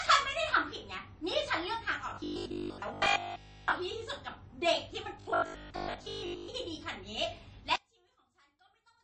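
From the start, the whole recording has a watery, swirly edge and nothing above 8.3 kHz, so the treble is gone. That's most likely MP3 compression, and a heavy one. The damage is plainly audible and fits a low bitrate of around 32 kbps.

From 2.10 to 3.72 s and again from 5.20 to 6.48 s, the speech turns into a stiff, metallic 50 Hz buzz. That's the robotic sound from repeated short buffers. A 20 ms chunk is probably being looped, and most of the real audio in those stretches gets skipped.

From 7.76 s to the end, one channel is inverted. Summing to mono cancels the shared centre and drops the level by about 32 dB. That's likely a polarity flip on one side, which leaves only a faint difference signal.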